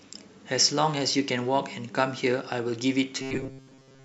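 From about 3.22 s to 4.04 s, the speech goes robotic from repeated short buffers, running right to the end. The voice turns into a stiff, metallic buzz pinned at 133 Hz that only loosely tracks what's being said. The likely cause is audio arriving too seldom, so playback keeps looping the last chunk, roughly 7.5 ms long, and skips the real material. Most of that stretch is repeats rather than fresh audio.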